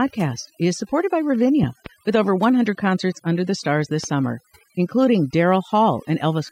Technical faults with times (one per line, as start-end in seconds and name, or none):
0.00-6.52 overdone noise removal
1.63-1.88 loud pop
4.04-4.06 loud pop